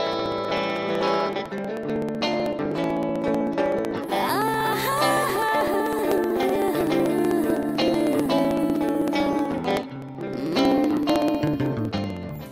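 From 0.07 s to 12.42 s, something keeps interrupting the USB link or the audio driver every 0.063 s, about sixteen times a second, which points to periodic USB or driver dropouts. At each interruption roughly a millisecond of audio is skipped outright rather than filled with silence, so the waveform jumps forward. Over the run this gives around two hundred evenly spaced ticks, forming a fast, regular clicking that is heard wherever there is signal.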